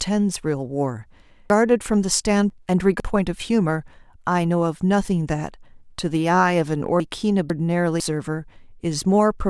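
A jumbled stretch from 1.5 to 3.0 s, and again from 7.0 to 8.0 s, is chunks out of order: a 500 ms block arrives late, playing two chunks behind in the first case and one behind in the second, leaving hard joins.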